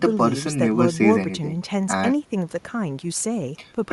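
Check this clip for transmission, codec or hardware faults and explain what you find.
One codec fault is present across the whole clip. The speech carries plainly audible Bluetooth LC3 compression damage: a grainy, breathy edge on the upper frequencies. The likely cause is LC3 coding at a rate that fits about 48 kbps with 10 ms frames. The encoder discards much of the high band and fills it with synthetic noise, producing that coarse, hissy texture.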